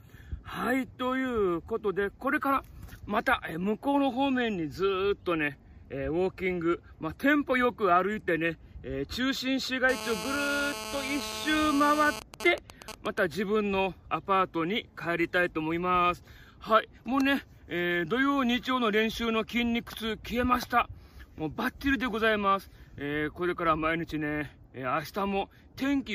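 GSM phone buzz runs from 9.89 to 12.20 s: a mobile phone on a call nearby transmits in pulses about 217 times a second, and the audio circuit demodulates them into a harsh, raspy 217 Hz buzz rich in harmonics, only about 9 dB below the wanted sound.

GSM signalling bursts follow from 12.22 to 13.18 s, as the phone's user falls silent mid-call and the handset sends only sparse groups of pulses. These are rectified into even ticks with a longer 217 Hz buzz twice a second, roughly 10 dB under the sound.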